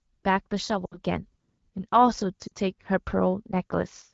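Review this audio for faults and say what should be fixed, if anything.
Lost AMR speech frames at 0.85–1.00 s and 2.47–2.52 s: the decoder repeats the last good pitch and vocal-tract settings at falling gain, so the speech smears and dips. Stronger radio error protection or better signal coverage would keep the frames passing their checksums.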